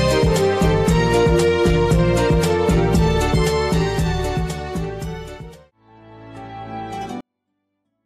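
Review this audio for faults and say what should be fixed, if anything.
A 24-bit alignment error makes the sound suddenly too quiet from 7.21 s to the end at 8.05 s. The level drops by about 48 dB in an instant. The tone stays clean, with no distortion or noise, but it becomes almost inaudible. The cause is 24-bit samples packed into the low bytes of a 32-bit word, then read as full 32-bit integers. Each value lands eight bits too low. Declaring the sample container and justification explicitly at every format boundary would prevent this.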